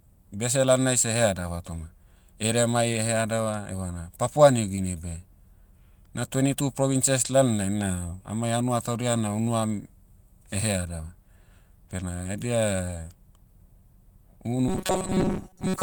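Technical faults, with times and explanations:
4.75 to 4.79 s, short concealed packet loss: About 20 ms of speech never made it to the decoder in time, so the receiver papered over it by carrying the previous sound forward and easing back in. You hear a quick smear or wobble.
14.68 to 15.82 s, robotic sound from repeated short buffers: The speech turns into a stiff, metallic buzz at 188 Hz that runs to the end of the clip. Most likely the playback kept looping a tiny chunk, about 5 ms, while most of the real audio was skipped.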